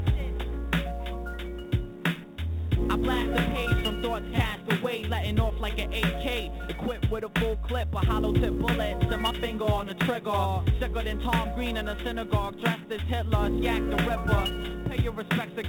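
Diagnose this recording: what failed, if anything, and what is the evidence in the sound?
Sample clock jitter at the converter stage runs through the whole recording. A hiss-like roughness rides on the sound, growing on loud passages and steep high-frequency content and disappearing in the quiet gaps. The converter's clock wanders by something like 10 microseconds, so each sample is taken slightly early or late, and the error scales with the waveform's slope, sitting roughly 25 dB below the signal. The band ending near 4 kHz fits the G.711 call path.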